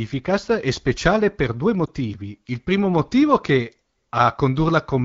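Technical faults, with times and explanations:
1.86 to 1.89 s, lost AMR speech frame: a radio error left a frame failing its checksum, so the decoder reused the previous pitch and vocal tract settings at lower gain, giving a brief dip or warble of about 20 ms, consistent with one lost frame.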